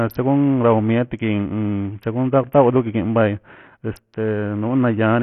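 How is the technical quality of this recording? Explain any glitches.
The recording is technically weak: heavy codec damage runs through the whole speech clip. The likely cause is Bluetooth SBC compression at a very low bit pool, which fits roughly 48 kbps. The codec splits the signal into a few wide sub-bands and starves the upper ones of bits, so nothing survives above 16.8 kHz. The coarsely quantised remainder carries a gritty, grainy noise with aliasing on the speech.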